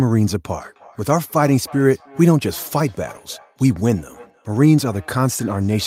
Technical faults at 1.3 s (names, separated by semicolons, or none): feedback echo between two devices